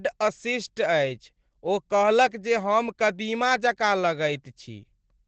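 Opus voice compression runs through the whole speech clip: the encoder is working in its SILK linear-prediction mode at wideband, and the coarse, plainly audible damage suggests a low bitrate, around 12 kbps. Nothing survives above about 8.6 kHz, so the voice loses its air and sibilant sparkle and sounds muffled. The excitation is coded crudely, which gives the speech a hoarse, faintly robotic grain that never lets up.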